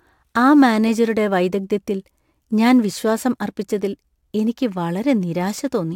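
Throughout the speech runs sample clock jitter: the converter's timing wanders by a few microseconds, so steep, bright parts of the waveform are misplaced, leaving an error roughly 35 dB down. Unlike a steady noise floor, this roughness swells on loud, sibilant moments and disappears in pauses.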